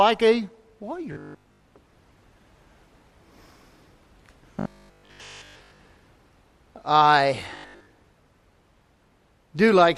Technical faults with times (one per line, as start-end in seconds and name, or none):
1.13-1.65 robotic sound from repeated short buffers
4.60-5.80 robotic sound from repeated short buffers
7.57-7.93 robotic sound from repeated short buffers